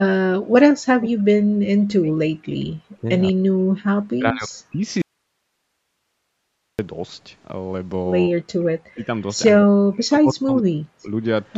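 From 0.26 to 1.53 s, 1.79 to 2.18 s, 2.44 to 3.07 s, 3.32 to 3.66 s, 4.11 to 4.50 s and 4.70 to 4.86 s, the speech is suppressed in double talk: it dips by up to about 40 dB, likely because an echo canceller mistook it for loudspeaker echo. The waveform shows chopped, sunken stretches, and the spectrogram shows harmonics fading in patches.

From 5.02 to 6.79 s comes an audio dropout to a faint residue, likely a lost signal on a path that stayed live. The sound cuts off abruptly, leaving only hiss about 55 dB down. The waveform shows a flat band of noise, and the spectrogram shows a uniform pale wash.

The suppression returns from 8.28 to 9.10 s and from 9.58 to 11.10 s, again with gaps up to about 40 dB deep. In the spectrogram, energy thins throughout the band, which stops at 8 kHz.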